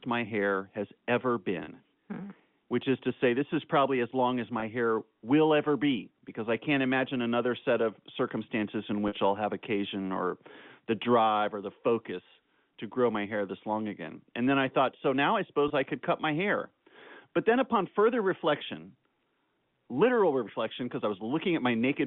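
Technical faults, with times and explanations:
1.64–1.68 s, 4.60–4.62 s, 9.08–9.12 s and 15.68–15.70 s, packet loss with pitch repetition: brief gaps of 40 ms (after "my hair has ever"), 20 ms, 40 ms and 20 ms, bridged by repeating the last pitch period. Each is too short to fade out, so it sounds like a slightly held, buzzy tone. The 40 ms gaps fit two lost 20 ms packets. The band-limited telephone sound of the G.711 line is present throughout.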